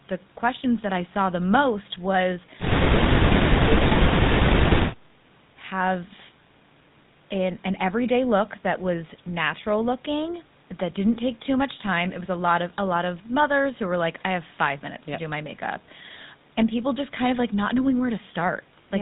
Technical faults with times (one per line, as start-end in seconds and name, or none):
0.00-19.01 GSM full-rate codec